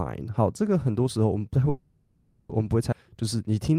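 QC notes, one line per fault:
1.69–2.52 s, call audio freeze: the sound stops moving forward and the last moment is drawn out as a fading buzz or hiss for about 0.8 s. There is no dead silence, and when the audio resumes it carries on exactly where it left off, with nothing lost. The likely cause is packets held up in transit, draining the jitter buffer so the receiver padded the wait. The added gap with no missing material is what separates it from a dropout.
2.91–2.95 s, skip ahead: playback jumps forward. Roughly 0.4 s of audio is gone, and the two sides are butted together with only a sliver of fill, about 10 ms. Later audio had already arrived, so the stretch was discarded, either in transit or by an overflowing jitter buffer, instead of being waited for. Unlike the freeze just before it, nothing is stretched and nothing is paused; material is simply missing, and the join sounds abrupt.
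3.03–3.79 s, jitter buffer slow-down: from here to the end the audio runs at about 87% speed, with roughly 104 ms added in total. The pitch stays where it was while sounds are drawn out, and a slight warble may be audible. The receiver repeated single pitch periods and scraps of pause to rebuild its reserve after running low or raising its target delay. That steady, even stretching sets it apart from the single frozen, fading hold earlier in the clip.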